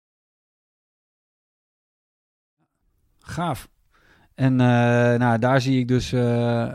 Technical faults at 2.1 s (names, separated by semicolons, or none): none